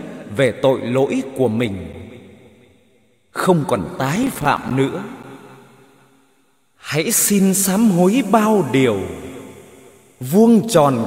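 At 1.93 s there is a block of digital silence. About 8.8 ms of samples drop straight to silence and then return. There is no fade on either side, so the hard edges make a single sharp tick rather than an audible hole. The likely cause is that the output buffer was not filled in time.

From 4.16 to 4.71 s comes processor overload crackle. The processor misses its deadlines again and again for about half a second. The buffers appear to be roughly 5 ms each, and something like fifteen of them fail. Each missed buffer becomes a small stretch of silence with abrupt edges. Heard together, these gaps form a gritty, tearing crackle over the sound, and it stops once the load eases.

At 5.23 s a second block of digital silence appears. This gap lasts about 9.6 ms. It again produces a crisp click where the audio cuts out and snaps back.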